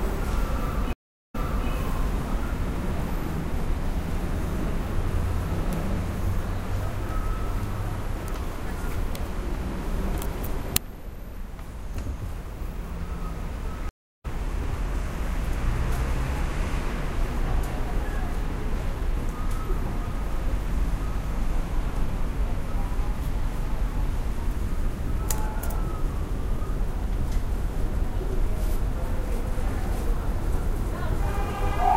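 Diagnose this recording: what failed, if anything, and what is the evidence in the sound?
The network connection dropped twice, and each time the player reconnected and restarted its decoder partway through the stream: a stream reconnect. At 0.93 s the audio goes silent for 370 ms, then picks up 392 ms earlier than where it stopped, repeating material as the server resent a burst; the event spans to 1.69 s. At 13.89 s a 309 ms gap follows, and playback resumes about 0.3 s further on, skipping ahead, with recovery complete by 14.26 s.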